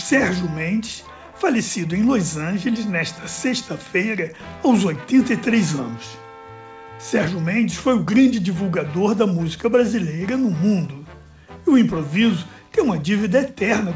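No technical faults can be heard anywhere in the clip.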